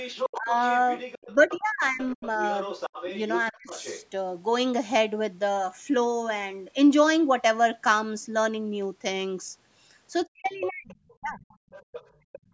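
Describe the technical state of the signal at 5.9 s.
At 5.9 s the signal is intact, with no dropout, distortion or other fault, only the ordinary call microphone processing that rolls off the lowest bass and carries nothing above 8 kHz.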